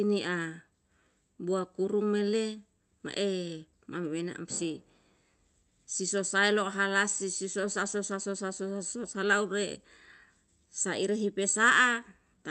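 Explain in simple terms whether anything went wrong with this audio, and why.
Nothing went wrong; this recording sounds as expected.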